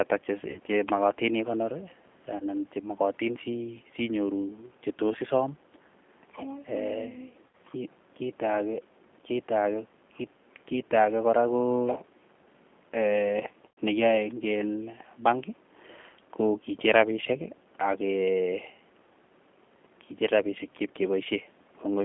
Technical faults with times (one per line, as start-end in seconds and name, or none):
0.00-22.04 G.729 codec
0.50-0.60 VoIP packet loss concealed by the speech codec
2.37-2.45 VoIP packet loss concealed by the speech codec
7.51 VoIP packet loss concealed by the speech codec
13.73 VoIP packet loss concealed by the speech codec